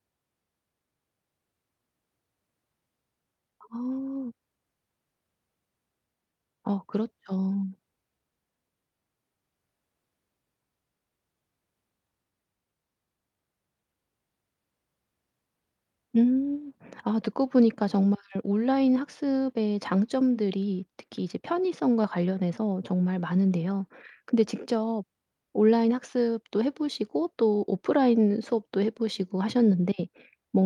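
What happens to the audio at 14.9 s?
Nothing goes wrong at 14.9 s: the speech runs straight through that point with no dropout, click, glitch or other fault.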